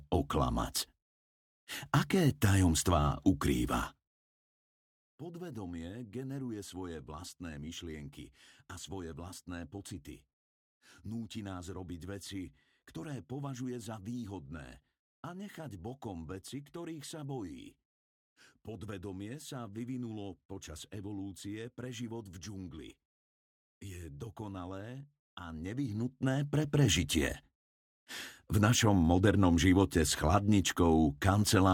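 From 25.38 to 26.88 s, a level change of roughly 15 dB is applied in discrete jumps instead of a continuous ramp, about fifty times a second, with no smoothing between steps. Each jump puts a tiny discontinuity into the waveform, so the move produces zipper noise: a fine, rapid ticking or buzzy zipping that rides on top of the sound for the second and a half the level is travelling, then stops once it settles.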